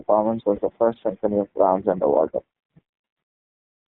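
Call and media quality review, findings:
iLBC codec, whole clip: narrowband speech, band-limited to roughly 150 Hz–3.6 kHz, with plainly audible rough, synthetic texture. Each 20 ms frame's excitation is coded on its own, and the coarseness fits the 15.2 kbps mode. Nothing up top survives, so sibilants lose their air.

Lost iLBC frames, 0.56–0.60 s: a brief held, slightly buzzy vowel-like smear, about 20 ms. That points to one dropped packet. The decoder repeats the last pitch cycle with noise mixed in, then snaps straight back to normal speech on the next frame.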